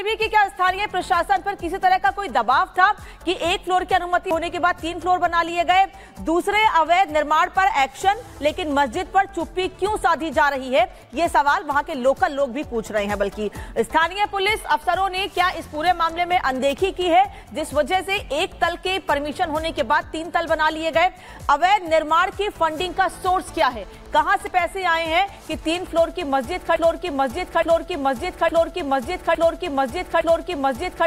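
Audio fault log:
26.76–31.07 s, broken-record loop: a 0.86 s fragment repeats five times back to back to the end, likely a stalled stream; the spectrogram shows identical tiled blocks.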